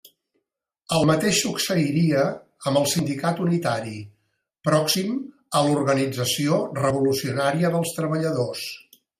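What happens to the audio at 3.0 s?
At 2.99 s, just after "mateix succeiria amb el", the speech skips forward: a few tens of milliseconds vanish and the two sides butt together with no gap. This is likely audio missing between chunks, with a piece dropped as one 2-second chunk closes and the next opens.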